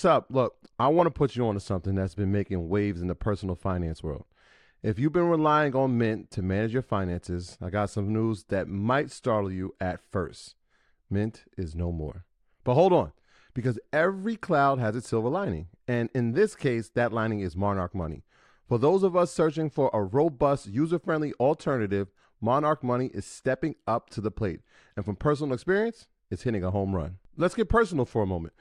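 Two devices in the chain are likely running on unsynchronised clocks, around 30 ppm apart, so a single sample is dropped or repeated whenever the drift adds up to a whole sample. The result in this speech clip is clock slip clicks: faint, regular ticks roughly every 0.7 s, about forty in all, from 0.54 s to 28.43 s.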